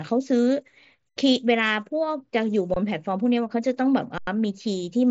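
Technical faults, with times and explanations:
1.09 to 1.16 s, 2.74 to 2.76 s and 4.18 to 4.27 s, underrun with held sample: the speech freezes on a flat, held level for about 70 ms, 23 ms and 93 ms. The output buffer ran dry and the converter just sat on its last value, so each stop is nearly clickless. Nothing seems to be skipped; the speech picks up where it paused, so the restarts are soft too. The 23 ms gap fits a 1024-sample buffer.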